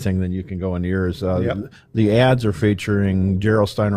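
Speech, in which the adaptive stream switches to a lower bitrate at 1.2 s, just after "you can go into", and stays there to the end. The quality abruptly drops with more codec artefacts but no gap, which fits Opus stepping down from 64 to 32 kbit/s.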